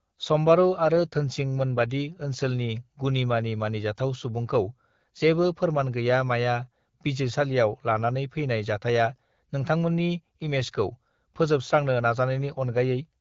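Speech carried over an AMR wideband (HD Voice) link, its band-limited but clear character fitting AMR-WB at 12.65 kbit/s, with no technical fault to report.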